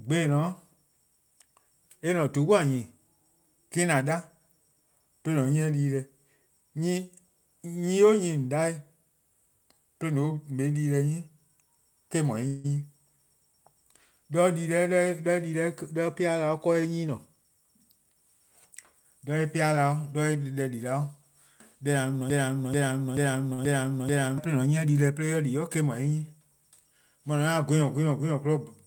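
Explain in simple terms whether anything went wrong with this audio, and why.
At 12.47 to 12.66 s there is a call audio freeze: the speech stops and the last sound is held as a fading buzz for about 0.17 s, then continues where it left off, with nothing lost. Delayed network packets are the likely cause.

From 15.27 to 16.68 s and again from 26.71 to 27.03 s, a jitter buffer speed-up makes the speech run about 8 to 9% fast at the same pitch. Short slices, roughly 150 ms and 40 ms in total, are trimmed to cut built-up delay.

From 22.3 to 24.38 s a broken-record loop repeats the same 0.43 s piece five times back to back, and the speech that should have played there is lost. A stalled player or stream is the likely reason.

Inside that loop, at 23.53 to 23.60 s, a short stall from a late packet holds one sound about 47 ms too long before playback resumes.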